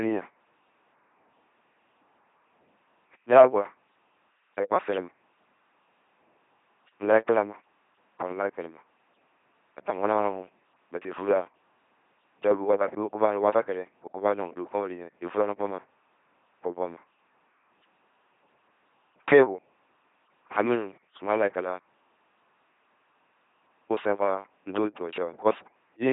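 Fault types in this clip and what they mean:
LPC-10 vocoder: The speech runs through this low-rate vocoder for the whole clip, and the damage is heavy. Each moment is rebuilt from a small set of filter settings, excited by either a pulse train or noise, never a mix. That gives the voice a buzzing, mechanical, robotic quality throughout. The sound fits a rate of about 2.4 kbit/s.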